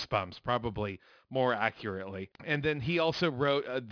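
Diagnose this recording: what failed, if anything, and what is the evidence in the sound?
Aliasing runs through the whole recording, introduced at sample-rate conversion. Sibilants sound gritty and metallic, and the spectrum runs hard up to a 5.5 kHz edge, pointing to a drop from 48 kHz to 11 kHz without anti-alias filtering. Content above 5.5 kHz folds back as false tones roughly 20 dB below the speech.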